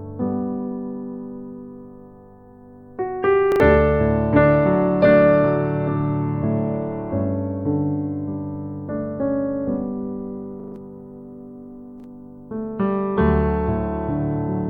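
The audio has three repeated-buffer stutters, at 3.52–3.6 s, 10.6–10.76 s and 12.0–12.04 s. Each one replays a 40 ms fragment with hard joins, twice, four times and once respectively, when fresh data arrived late. Roughly 70, 150 and 40 ms of sound go missing.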